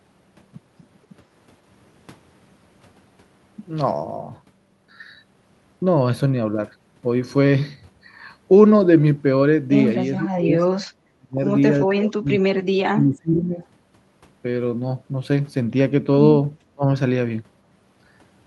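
Speech suppressed in double talk hits at 10.18–10.61, 11.15–11.40, 11.87–13.61 and 16.72–16.86 s, likely an echo canceller muting the talker during overlap. The speech drops by roughly 25 to 35 dB, showing as hollowed waveform stretches and blank spectrogram gaps.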